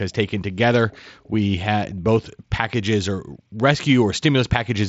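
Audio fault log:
Nothing stood out on listening to this speech clip.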